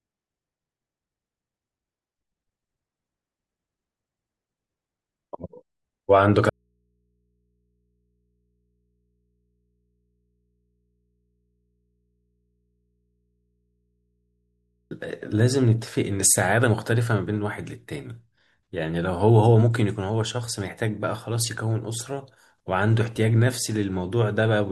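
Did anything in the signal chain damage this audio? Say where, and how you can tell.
Yes, there's an audio dropout to a faint residue in the analogue wiring. The speech cuts out abruptly at 6.50 s and returns at 14.91 s. That's about 8.4 s of nothing but mains hum, roughly 50 dB down, which likely points to a connection left open.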